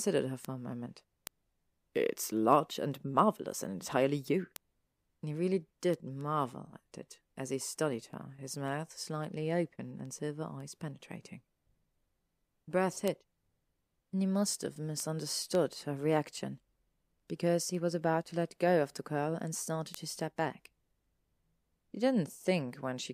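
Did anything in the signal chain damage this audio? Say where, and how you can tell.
Yes, word clock ticks at the digital interface: ticks repeat roughly every 0.3 s from 0.17 s to 22.97 s, about a hundred of them. An unlocked receiver slips one sample each time its clock, around 70 ppm off the sender's, drifts past. Buffer glitches leave gaps instead.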